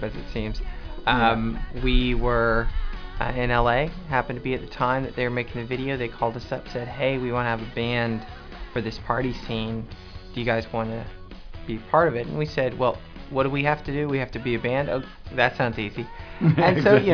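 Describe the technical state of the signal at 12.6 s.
At 12.6 s the signal runs cleanly, with no dropout, distortion, glitch or other audible fault.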